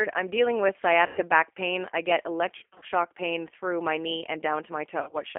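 Throughout, the G.729 codec rebuilds speech at 8 kbit/s from a filter, pitch and sparse pulses. This gives a rough, synthetic grain rather than the clean dullness of simple band-limiting. At 1.07–1.21 s, 2.58–2.86 s and 5.03–5.18 s, VoIP packet loss concealed by the speech codec stretches the speech into a fading buzzy tone or coloured noise instead of silence or clicks.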